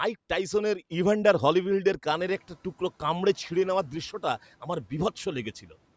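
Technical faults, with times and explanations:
2.09–2.49 s, noise suppressor catching up: the room noise jumps by about 17 dB around 2 s, and for the next 0.4 s it passes through the suppressor with too little reduction. The suppressor's estimate of the noise floor still reflects the quieter level before the jump. It takes about 400 ms to adapt to the new floor. Once it does, the noise is cut by about 7 dB and settles to about 28 dB below the speech.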